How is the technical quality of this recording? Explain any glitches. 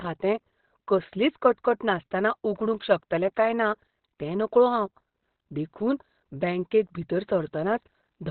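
The recording has one fault, and it runs through the whole clip. Opus compression, from start to finish, likely explains the sound: the speech sounds muffled and hoarse, with heavy codec damage and nothing above 4.3 kHz. When bits are this scarce, the encoder narrows the bandwidth and switches to its speech-oriented SILK mode, modelling the voice instead of keeping fine spectral detail. The narrowband, dulled result fits a low bitrate of around 12 kbps.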